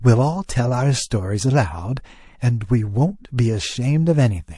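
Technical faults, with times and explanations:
throughout: MP3 compression. Plainly audible codec damage gives the speech a watery, swirling texture with smeared onsets, likely from a low MP3 bitrate around 48 kbps. A spectrogram shows sparse high-frequency patches blinking on and off between frames.
0.45–0.49 s: pre-echo. A short hiss runs about 41 ms ahead of a sharp attack, roughly 17 dB above the quiet before it, so the onset sounds soft. That fits a long transform block near 48 ms with no switch to short blocks. The waveform shows a low noisy smear before the spike, and the spectrogram a broadband haze ahead of it.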